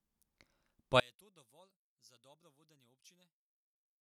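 One channel inverted, from about 1.0 s to the end of the clip at about 4.0 s: when the speech is heard in mono it collapses, dropping by about 32 dB to a faint residue. The likely cause is one stereo channel with reversed polarity, so the centred content shared by both channels cancels on summing. Only the small difference between left and right survives, leaving a faint, distant trace of the voice.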